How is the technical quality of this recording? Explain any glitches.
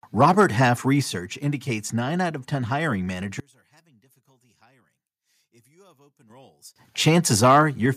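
The recording has level problems: three bursts of distortion on loud speech and three sudden jumps in overall volume.

Microphone overload occurs from 0.21 to 0.64 s, 7.07 to 7.09 s, and 7.43 to 7.62 s. The loudest syllables crackle with a harsh edge, about 3 to 4 dB beyond the converter's limit. In the brief 7.07 s burst, roughly a tenth of the samples are flattened. This is likely the microphone input set too high, so peaks hit the converter's ceiling. A waveform shows flat-topped peaks, and a spectrogram shows a smear of broadband energy.

Microphone volume stepped down at 1.02 s, by about 5 dB, and at 7.86 s, by about 4 dB. Voice and background both drop in level at once. Each drop follows shortly after a distorted stretch, so the call software likely reduced the input volume after detecting clipping. The waveform's envelope steps down abruptly, and the spectrogram darkens evenly across all frequencies from that point.

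Microphone volume stepped up at 6.3 s, by about 7 dB. Speech and background noise jump louder together. The call software judged the microphone too quiet and raised the device's input volume in a single step. On a waveform the envelope widens abruptly. A spectrogram brightens uniformly at that instant, including the noise floor between syllables, which shows that the gain itself changed.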